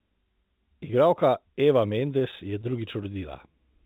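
A short speech recording carried over a narrowband call path, with nothing above 4 kHz, which fits G.711 mu-law coding. Sample clock jitter runs through the whole clip. The converter's timing wanders by roughly a couple of microseconds, so each sample lands slightly off its intended instant. The resulting error scales with how fast the waveform is changing and sits around 45 dB below the signal. It is heard as a faint hiss or grain that swells on louder, brighter speech and disappears in pauses. From 2.0 to 3.16 s there are repeated stalls (stutter). Audio arrived too slowly to keep the receive buffer fed, so playback ran dry eleven times. Each time, the receiver stretched the last sound to cover the wait. About 108 ms was filled this way, roughly 9% of that stretch, with the longest single gap 17 ms and no audio actually lost. The result is a dragging, hiccupping delivery rather than dropouts.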